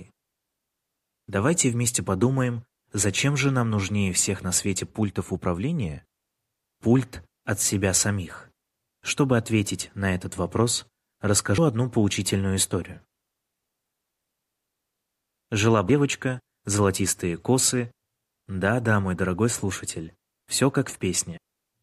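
At 11.58 s and 21.37 s, compressed frames are skipped: roughly three 26.1 ms frames drop out, jumping about 70 ms ahead. Each join is a smeared blip, seen as a brief discontinuity on the spectrogram.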